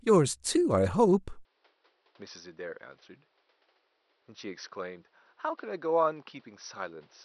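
At 1.45 s the input likely switched to a poorer device, with no gap at the switch. From there to the end the speech loses everything above 5.9 kHz, drops roughly 10 dB, and sounds duller and boxier over a new noise floor some 35 dB down.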